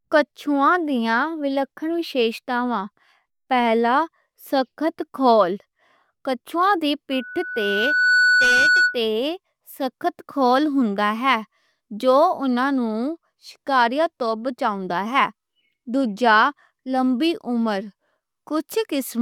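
A microphone in this speech recording was picking up the loudspeaker it was feeding, and at 1.5 kHz the gain around that loop climbed past unity, producing loudspeaker feedback squeal. Starting at 7.12 s, just after "کچھواں دی", a steady 1.5 kHz tone rises out of the speech over about a second, swelling until it sits around 5 dB above the talker. The squeal holds until 9.03 s, when the tone stops.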